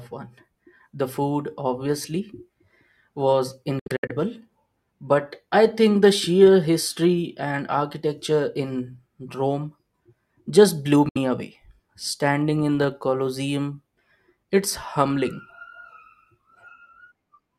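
The speech cuts out in short bursts of silence between 3.79 and 4.11 s, then once more for 64 ms at 11.09 s. Each hole has hard edges or a brief fade and picks up further along, as if the audio kept playing. This is a likely Bluetooth dropout, where late packets were discarded before reaching the headphones.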